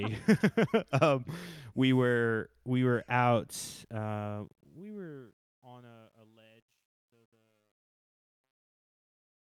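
After "were we were out", from 3.8 s to 9.5 s, the fade-out shows truncation distortion. Undithered low-bit steps, fitting an 11-bit stage, turn it gritty, worst after 5.6 s.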